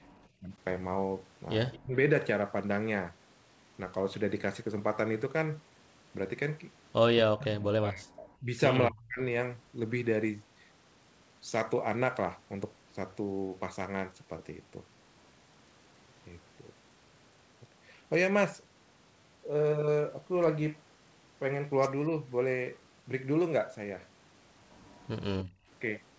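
From 0.0 to 0.13 s the room sound dips by about 8 dB: background gated by the echo canceller, which ducked the microphone while the loudspeaker played. Only the ambience drops, not the talker. At 0.41–0.5 s, then 1.79–2.0, 7.21–8.53 and 8.89–9.2 s, the voice itself sinks by about 10 dB at first and then up to about 40 dB. This is speech suppressed in double talk, likely from both sides talking at once. Between those first two dips, at 1.72–1.79 s, a faint copy arrives 226 ms late at roughly 25 dB below the voice: an echo leak, likely residue the canceller missed. It is a separate delayed repeat, not a drop in level. At 25.45–25.69 s the background gating returns more deeply, about 23 dB. Throughout, the G.722 call path leaves nothing above 8 kHz.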